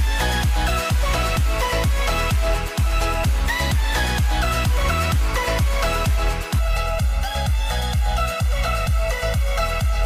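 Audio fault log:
6.59 to 10.06 s, channel delay (comb filtering): one channel begins arriving later than the other, by roughly 1.5 ms, and when the two are combined to mono the shared content cancels at evenly spaced frequencies, the first notch falling near 300 Hz with further notches repeating above it. Because the offset holds steady, the notches stay fixed rather than sweeping, so from 6.59 s to the end the sound turns hollow and phasey, thinner in body than before.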